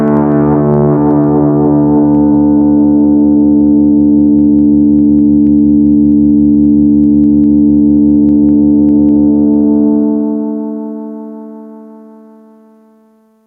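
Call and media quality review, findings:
Gain pumping throughout the clip. Level swing around 10 dB, dynamics squashed. Likely input gain set far too high, with a fast limiter pulling it down. Unlike a noise gate, background rises rather than cutting out.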